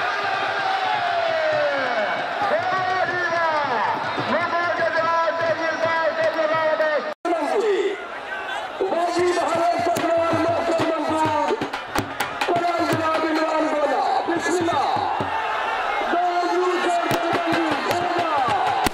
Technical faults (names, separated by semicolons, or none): integer overflow